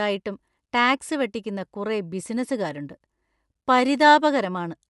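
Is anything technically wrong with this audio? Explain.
Yes. Throughout the speech, Bluetooth LC3 compression is plainly audible. Nothing is heard above about 11.5 kHz. The upper band is zeroed and partly filled with noise, giving a breathy, grainy edge. This likely comes from the LC3 codec with 10 ms frames, around 48 kbps.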